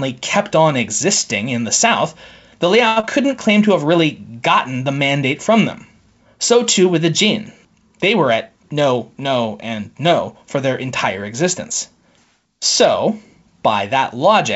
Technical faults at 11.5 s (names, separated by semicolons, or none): none